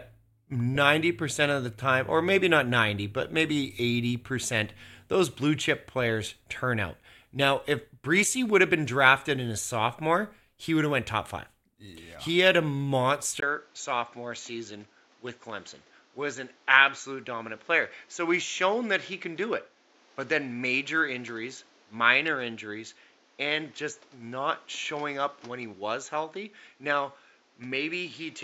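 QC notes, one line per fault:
13.40–28.44 s, input switched to a poorer device: after a 20 ms gap the speech turns dull and boxy, with nothing above 7.6 kHz. It is around 5 dB quieter over new noise some 30 dB down, likely from a switch to a narrower-band microphone or headset.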